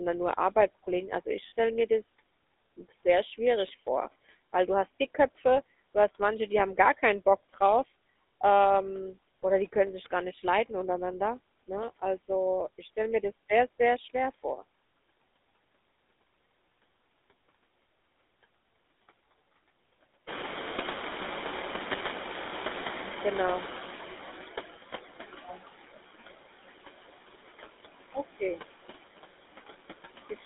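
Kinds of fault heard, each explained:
Noise suppressor artifacts: Throughout, a suppressor pulls down the bands it judges to be steady background, by about 18 dB, re-deciding frame by frame. The background sinks in the pauses and swells back under the talker. This pumping follows the speech itself, unlike the slow drift of the later catching-up episode.
GSM full-rate codec: The whole clip passes through a line band of about 250 Hz to 3.7 kHz and a coder that fits the 13 kbit/s GSM full-rate codec. That codec rebuilds the voice from a vocal-tract filter fed by sparse, regularly spaced pulses, which gives a plainly audible buzzy, gravelly roughness. It is constant and tied to the voice, which separates it from the suppressor's pumping in the background and from the brief metallic ring of the frame loss.
Lost GSM frames: At 1.48 to 1.52 s, between "also ich" and "mir das", about 40 ms of signal is missing, which fits two lost 20 ms frames. 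The decoder repeats the last good frame's parameters, so the sound briefly freezes into a rough, metallic ring instead of a clean dropout. It is a short, sudden, tonal glitch, unlike the suppressor's cuts, which dull the speech without adding that ringing.
Noise suppressor catching up: Around 20.5 s the room noise jumps by about 18 dB, to roughly 10 dB below the speech. The suppressor's noise estimate lags, so from 20.27 s the louder background comes through with little reduction. Over about 4.4 s, to 24.7 s, it sinks as the estimate adapts and the cut reaches about 15 dB. The slow, one-way fade of the background sets this apart from the quick frame-by-frame pumping heard throughout.
Speech cut by the noise suppressor: Here the suppressor mistakes parts of the speech for noise and turns them down with the background. From 25.28 to 25.61 s, around a fifth of a second of sound drops by up to about 15 dB. 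At 30.3 to 30.45 s, roughly a tenth of a second sinks by up to about 18 dB. The affected sounds come out swallowed and faint, with no metallic ring, which distinguishes these cuts from the lost frames.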